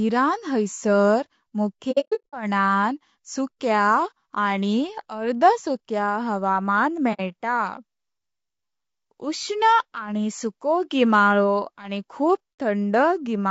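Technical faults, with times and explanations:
throughout: rough, grainy speech with noise between the harmonics and a thin top end, likely low-delay AAC compression (AAC-ELD) at about 32 kbps.
1.91–2.34 s: AAC frame loss with muting. Soft-faded holes scattered across 420 ms, the longest about a tenth of a second, as missing frames decode to silence.
7.13–7.21 s: AAC frame loss with muting. A brief 60 ms soft dropout, which fits a couple of zeroed frames.
12.59 s: AAC frame loss with muting. Another quick faded gap of about 60 ms.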